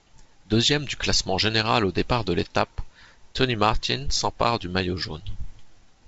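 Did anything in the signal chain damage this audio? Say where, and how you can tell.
No, the only stage that leaves an audible mark is the wideband telephone codec, consistent with G.722, whose band limit leaves nothing above about 7.7 kHz, and no point in the chain shows damage.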